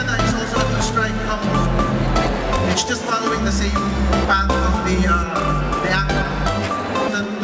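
No technical faults turn up anywhere in the clip; it comes through a normal call path with nothing above 8 kHz.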